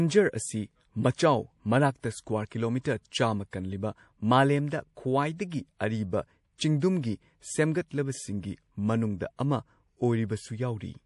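Speech with plainly audible watery, swirly artefacts throughout and nothing above 11.5 kHz, likely MP3 compression at a low bitrate, roughly 48 kbps.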